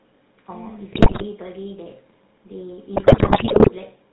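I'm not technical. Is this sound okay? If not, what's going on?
No. The whole clip has passed through the GSM full-rate codec, the original digital mobile phone system. It doesn't send the voice itself. It sends a rough description of the throat and mouth shape plus a pulsing buzz to drive it, and it drops everything above 4 kHz. The result, clearly audible here from start to end, is a muffled, buzzy, gravelly voice, like an old mobile call.

On top of that there are GSM bit errors, from about 0.92 to 1.24 s and again from about 2.96 to 3.71 s. During these stretches the radio signal was corrupted, so some of the numbers describing the voice arrived wrong. The decoder rebuilt the sound from bad instructions, and the voice breaks up into squawks, pops and gargling. The second burst is the longer and more damaged of the two.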